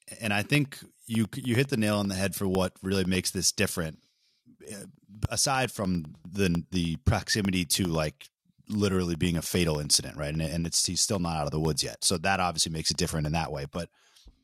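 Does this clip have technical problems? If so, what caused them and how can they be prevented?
Yes. From 0.05 s to 14.35 s there's a steady tick every 0.1 s, audible only under the speech. These are periodic USB or driver dropouts: something stalls the bus or driver, and a sliver of audio, roughly half a millisecond, drops to silence. To prevent it, find the background task hogging the USB bus or driver, give the interface its own port, and update the driver.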